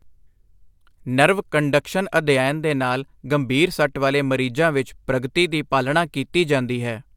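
Nothing in the speech here points to a technical fault, so there's nothing to flag along the way.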